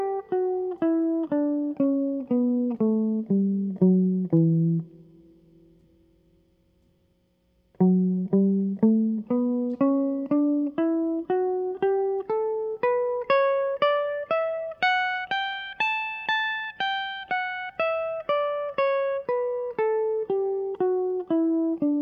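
From 1.02 s to 21.10 s, faint clock slip clicks tick roughly once a second, about twenty in all, likely from two unsynchronised clocks drifting around 20 ppm apart, dropping or repeating one sample. Each shows as a thin vertical spectrogram line and a tiny waveform step.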